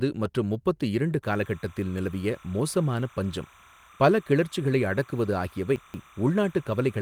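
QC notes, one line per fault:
1.23–7.01 s, timecode bleed: a steady chirping warble sits behind the speech, well down at roughly 25 dB below it, flipping between pitches near 1 and 2 kHz. Linear timecode running at 30 frames per second is leaking in from an adjacent track or cable.
5.76–6.00 s, chunks out of order: a brief jumbled, garbled moment. A 60 ms chunk of audio landed three chunks late and plays after the ones meant to follow it, so the sequence scrambles with three hard joins.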